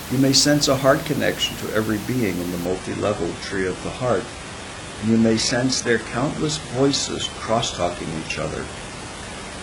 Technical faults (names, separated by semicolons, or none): adaptive stream at a lower bitrate